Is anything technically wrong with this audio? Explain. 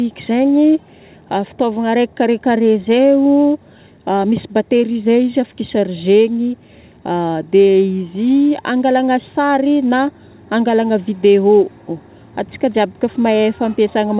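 No, nothing here is actually wrong: it's simply speech that came through a call path, and the way everything above about 4 kHz is missing is just what a narrowband phone codec sounds like.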